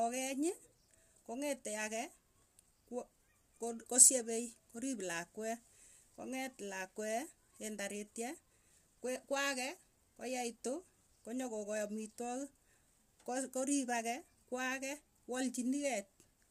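Throughout, the speech sounds rough and grainy. Nothing reaches above 15.6 kHz. Likely low-delay AAC compression, at a rate that fits about 32 kbps.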